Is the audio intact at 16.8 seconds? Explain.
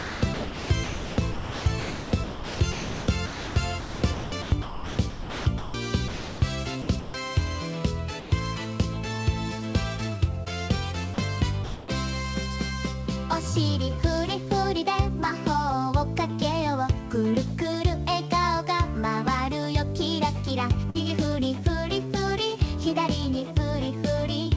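Yes, the audio is intact at 16.8 seconds, with nothing there beyond the ordinary band limit of the call path, whose G.722 coding leaves no content above 8 kHz.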